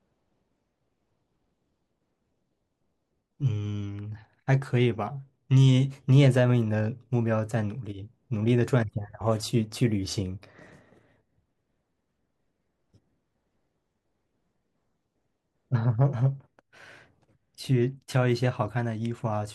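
No technical faults can be heard anywhere in this speech recording.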